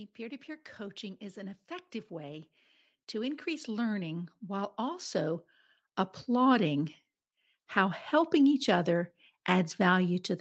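From 0.16 s to 2.56 s the speech and its background swell together by about 5 dB, then from 3.11 s to 5.47 s they climb again, this time by about 10 dB. That slow joint rise is automatic gain rising: the call's gain control judged the input too quiet and pushed its gain up step by step over more than two seconds each time, lifting the noise floor along with the speech, all within the 8 kHz band of the call path.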